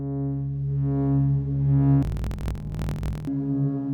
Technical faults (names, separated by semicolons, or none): interleaved audio read as planar